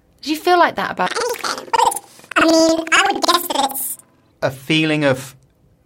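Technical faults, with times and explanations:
1.07–4.38 s: planar audio read as interleaved. In this stretch, blocks of left-channel samples followed by right-channel samples were read as if left and right alternated. Each block of about 93 ms, which fits 4096-sample blocks, therefore plays twice at double speed, once as left and once as right. The speech sits an octave (12 semitones) high while keeping its normal pace, with a flutter at about 10.8 Hz, the rate at which the blocks repeat.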